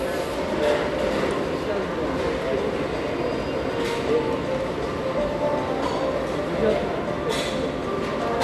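Throughout the clip, MP2 compression likely ran short of bits, which fits a rate near 80 kbps. Upper sub-bands are switched off and the rest coarsely quantised. Nothing remains above 12.2 kHz, so the sound is dull, with plainly audible gurgling, granular distortion.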